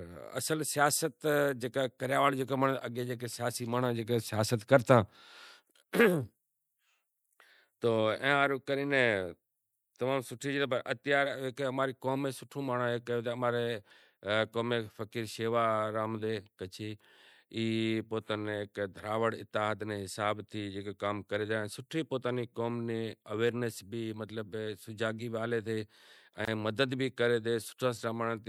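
At 26.45 s the speech drops out until 26.48 s, a gap at a join of encoded pieces lasting about 25 ms. The audio was evidently encoded in separate sections and joined without trimming, so the encoder's start-up delay and the padding of the previous section's final frame both remain as silence. It is heard as a brief hole in otherwise continuous sound, its edges softened by the codec, before the speech resumes exactly where it stopped.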